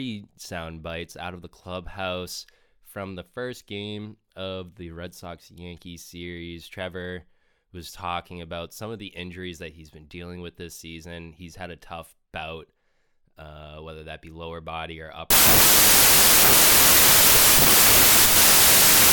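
From 15.30 s, right after "be lower body or", the speech collapses into loud hiss with the voice buried inside, slowed to two-thirds speed and lower in pitch, until 19.12 s. This is a wrong sample width fault, consistent with packed 24-bit data read as 16-bit samples.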